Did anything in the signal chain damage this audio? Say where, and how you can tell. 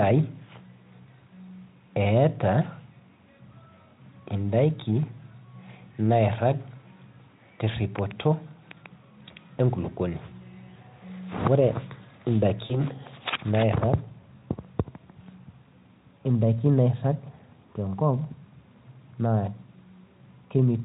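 Yes, at the network stage: VoIP packet loss concealed by the speech codec, from 12.65 to 12.81 s. About 40 ms of speech went missing, which fits two lost 20 ms frames. The decoder filled the gap by repeating its last pitch and spectral shape at falling gain, so the speech smears into a buzzy tone or coloured noise that fades. On a spectrogram, the spectrum runs flat and frozen, then dims. The waveform shows a decaying stretch. Because each decoded frame depends on the previous one, the sound stays weak until about 12.81 s, beyond the 40 ms actually lost. The Speex coding carrying the call adds at most faint artefacts of its own.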